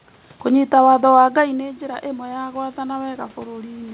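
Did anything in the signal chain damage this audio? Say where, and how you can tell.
Yes, in the call processing. From 1.33 s, just after "kũnyita watho wa", the level falls by about 11 dB as the talker moves back, and automatic gain rising follows: the gain control creeps upward through to the end at 3.93 s. What separates this from the talker simply returning to the microphone is that the room noise swells along with the speech, so the whole signal is being amplified, not just the voice. The band stops at 4 kHz, consistent with G.711 mu-law.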